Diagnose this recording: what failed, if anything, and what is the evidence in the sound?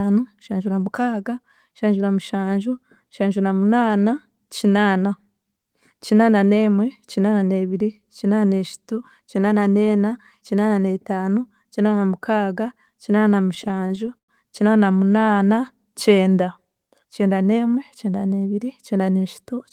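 Repeated stalls (stutter) between 13.23 and 14.30 s, a network-stage fault. Ten short holds add 208 ms to the speech, the longest lasting 109 ms, with nothing lost. Late packets kept draining the jitter buffer, so the receiver stretched the last sound until delivery caught up.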